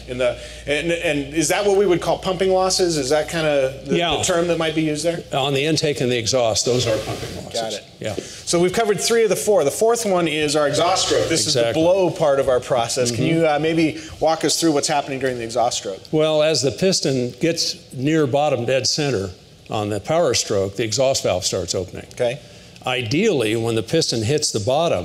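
No technical faults can be heard anywhere in the audio.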